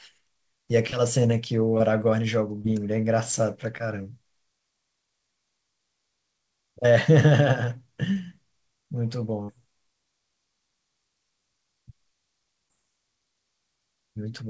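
Brief smears at 0.90, 1.78, 2.62, 3.78, 8.13 and 12.68 s are short concealed packet loss: about 20 ms of audio arrived too late, and the receiver bridged each gap by extending the preceding sound. At 9.43 to 9.50 s the last sound is held and fades out and the audio resumes further on. This is a burst of packet loss, with about 60 ms missing and replaced by a decaying continuation of the last sound. The call path's codec passes nothing above 8 kHz.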